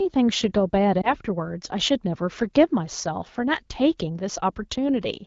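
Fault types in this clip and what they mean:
Lost AMR speech frames: a corrupted speech frame fails its check, and the AMR-WB decoder, running at 12.65 kbit/s, fills the gap by reusing the previous pitch and vocal tract settings at lowered gain. Between about 1.01 and 1.12 s this causes a brief dip or warble, which fits a single lost 20 ms frame. On a waveform it appears as a short amplitude sag. A spectrogram shows smeared, repeated harmonics with thinner energy.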